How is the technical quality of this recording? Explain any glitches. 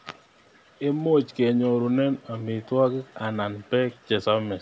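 No glitches: the speech has been through ordinary call microphone processing, with the lowest bass trimmed and nothing above 8 kHz, which is expected behaviour and not a fault.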